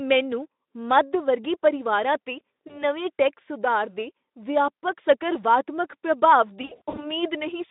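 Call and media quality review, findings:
VoIP packet loss concealed by the speech codec, 2.67–2.84 s: brief stretched smear, consistent with one lost 20 ms frame. Decoder extrapolates the last pitch and filter; weakness lingers as following frames rebuild state.

Same fault, 6.61–7.13 s: repeated dropouts over about 360 ms, longest run 60 ms. Sound stretches into fading tone and noise, with distortion persisting between gaps. Probable component: jitter buffer or network path feeding the narrowband Speex decoder (200 Hz–3.7 kHz line band).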